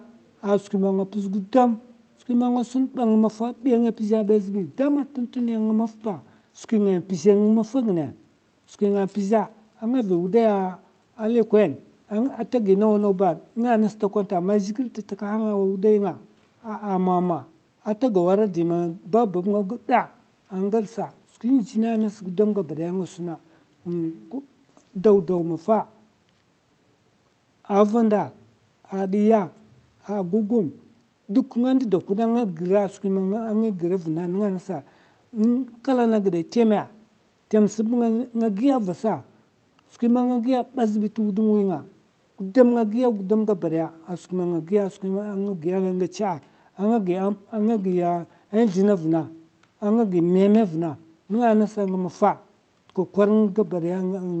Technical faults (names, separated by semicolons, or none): none